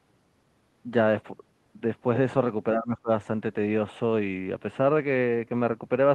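From 2.73 to 3.10 s the speech drops by around 20 dB, most likely speech suppressed in double talk: the echo canceller mistook the talker for loudspeaker echo and turned it down. The waveform envelope pinches inward, and spectrogram energy fades across that stretch.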